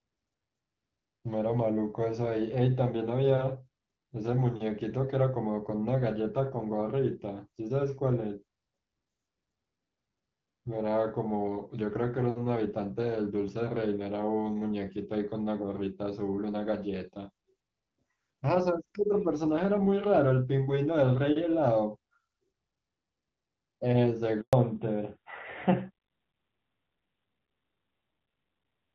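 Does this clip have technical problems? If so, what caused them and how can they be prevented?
Yes. At 24.41 s the call was handed from one network to another, a handover gap during which no speech frames reached the receiver. The sound fades within a few tens of milliseconds and stays silent for 120 ms, until 24.53 s, and whatever was said then is lost. Prevention: use make-before-break handovers, keeping the old link carrying audio until the new one is established.

Right after that gap, at 24.53 s, the call fell back to narrowband: the link renegotiated from the HD Voice codec, whose earlier light coding damage suggests AMR-WB at about 12.65 kbit/s, to an older codec that fits AMR-NB at 12.2 kbit/s. From there until the end, nothing above 4 kHz remains, and the speech sounds duller and rougher. Prevention: make sure both networks and the handover path support AMR-WB, so the wideband codec is kept after the switch.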